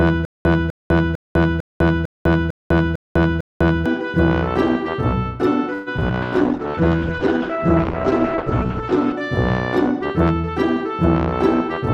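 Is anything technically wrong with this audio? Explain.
Yes, there are four distinct transport and playback faults.

From the very start through 3.86 s there is a stutter with silent gaps. A 251 ms fragment repeats at an even 451 ms period, eight times, with about 200 ms of digital silence between repeats. This is likely a stalled player or stream that replays its last buffered fragment on each retry and then runs dry. The material that should have played during this span never arrives.

From 5.73 to 6.12 s there is repeated packet loss, which gives a choppy, robotic sound. Four holes appear in quick succession, the longest 132 ms. The receiver covers about 161 ms of them by extending the preceding sound, which accounts for roughly 42% of the span, and the remaining 80 ms is simply missing. The unconcealed holes leave pieces of the audio missing.

From 6.23 to 9.2 s there is a call bitrate drop. 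The coarse, watery quality points to the encoder falling from about 96 kbps to around 10 kbps after the bandwidth estimate collapsed. At that low rate the codec also narrows its audio band, so the top end falls from 20 kHz to 8 kHz. The result is a muffled, roughly quantised sound that holds at its worst for 2.86 s.

From 6.68 to 6.91 s, inside the degraded stretch, there is a jitter buffer slow-down. The receiver repeated short pitch periods to rebuild its reserve, adding 45 ms and running the sound at 84% speed without changing pitch. This is heard as a brief drawn-out smear.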